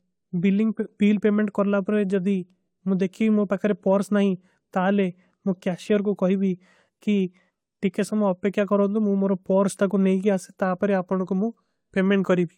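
Nothing goes wrong anywhere in this recording of speech, so there's no technical fault to point to at any moment.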